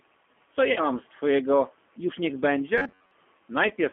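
G.729 codec coding runs through the whole speech clip, and the sound points to the 8 kbit/s G.729A variant. The decoder rebuilds each 10 ms frame from a vocal tract filter, a pitch predictor and a few pulses rather than the actual waveform, so the voice has a plainly audible rough, synthetic edge. The line band confines everything to roughly 250 Hz to 3.4 kHz, taking away low body and upper clarity.

VoIP packet loss concealed by the speech codec first appears from 0.72 to 0.89 s. About 40 ms of audio went missing, which fits two lost packets. The decoder filled the gap by extending its last pitch and filter settings at falling gain, so the sound smears and fades. Because each frame depends on the one before, the speech stays weak or distorted for a while after the gap.

Robotic sound from repeated short buffers follows from 2.78 to 3.11 s. For most of that stretch the sound takes on a rigid, metallic buzz at about 94 Hz that only loosely tracks the speech. 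A period of about 10.7 ms fits the likely cause: new audio arrived too seldom, and the software replayed a short buffer over and over while real audio was skipped.

The second VoIP packet loss concealed by the speech codec falls at 3.68 to 3.72 s. About 20 ms is lost, which fits a single packet. The decoder again bridges the hole by extrapolating its last frame, leaving a brief smear and a dip in level as the decoder recovers.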